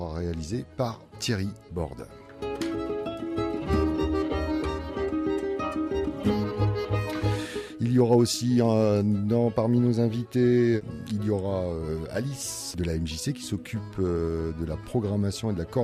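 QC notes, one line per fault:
No faults were heard anywhere in this clip. Nothing in it calls for a QC note.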